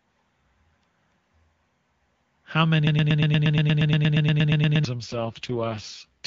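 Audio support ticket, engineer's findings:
Broken-record loop, 2.87 to 4.85 s. Likely a stalled player or stream buffer re-sending its last fragment. Symptom: one 118 ms slice of speech repeats exactly, back to back, about 17 times, for nearly 2 s. Speech from that span is lost, not delayed. Playback resumes with no catch-up.

AMR rate drop, 4.98 s to clip end. Link degradation forces the codec into a lower mode, with bits diverted to error protection. The sound fits a fall from the clean 23.85 kbit/s AMR-WB mode to 6.6 kbit/s. Symptom: speech turns rough, raspy and synthetic. Bandwidth unchanged, no dropout, no recovery before the clip ends.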